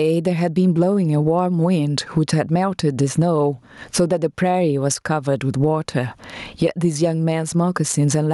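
Speech runs through the whole clip with a breathing, pumping quality. Loud and quiet passages sit unnaturally close in level and the sound feels squashed. This is gain pumping, with a swing of about 20 dB. The likely cause is input gain set far too high, with a fast limiter or compressor clamping down on every peak.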